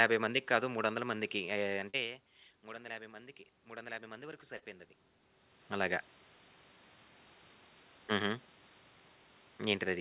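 A band-limited speech call, cut off above 4 kHz as the G.711 A-law path implies, with short concealed packet loss at 1.9–1.96 s and 4.58–4.64 s: roughly 40 ms gaps bridged by 35–42 ms of extrapolated audio, heard as brief smears. Automatic gain rising runs from 2.64 to 4.94 s, lifting voice and room noise together by about 4 dB after the input dropped about 18 dB when the talker moved back.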